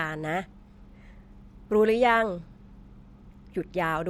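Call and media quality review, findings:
Nothing to log on this speech clip; no faults turned up anywhere in it.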